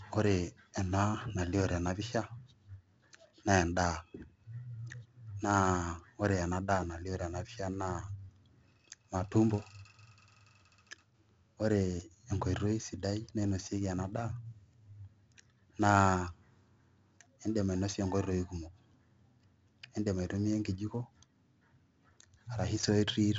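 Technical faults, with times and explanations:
Throughout, 4-bit ADPCM compression: heavy gritty hiss rides on loud speech and follows its level, with roughness on sharp onsets where the adaptive step lags. A spectrogram shows level-tracking noise and nothing above 7.8 kHz, which fits 16 kHz sampling at 64 kbps.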